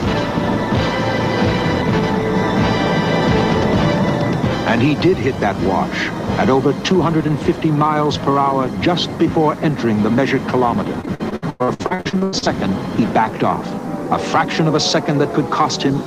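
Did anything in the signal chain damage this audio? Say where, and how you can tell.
Yes: repeated packet loss (robotic sound) from 11.01 to 12.48 s, a network fault. Well over a dozen short holes, the longest about 96 ms, are each filled by extending the preceding sound, so roughly half that stretch is concealment, producing choppy, robotic audio.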